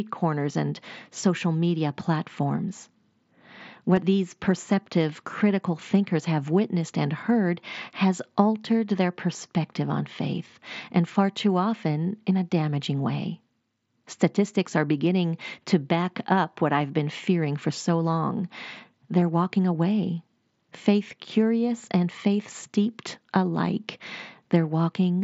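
At 3.96 s and 19.21 s, concealed Bluetooth headset packet loss fills gaps of 15 ms and 7.5 ms, which fits two lost packets and then one, with copied recent waveform. The single loss at 19.21 s is nearly hidden. The waveform shows a brief repeated cycle.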